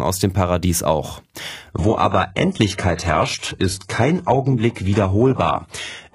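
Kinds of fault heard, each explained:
Adaptive stream at a lower bitrate: the player switched to a cheaper version of the stream when the connection slowed. Here the speech changes abruptly at 1.72 s and stays degraded to the end. There is no gap at the switch. After it, nothing reaches above 11.5 kHz, the remaining treble sounds synthetic, and coding artefacts thicken. The sound points to a move from a clean wideband AAC stream to HE-AAC at a very low bitrate.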